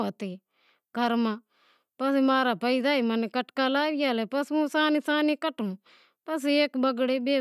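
A short bit of speech, and there's nothing technically wrong with it anywhere.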